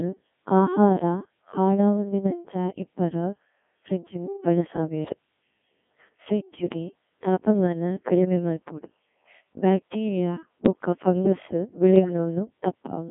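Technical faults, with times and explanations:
Throughout: Codec 2 vocoder. The sound is robotic and buzzy and confined to about 200 Hz to 3.5 kHz, with heavy damage. Only pitch, voicing, energy and a spectral envelope survive, and sine-wave resynthesis replaces the original waveform. This is consistent with a 1.6 kbit/s mode.
11.96 to 12.13 s: bit errors on digital voice radio. For about 0.17 s the synthetic sound jumps in pitch, level and timbre and turns to warbling gibberish. Flipped bits, at an error rate of a percent or two, corrupted the parameters of a few consecutive frames.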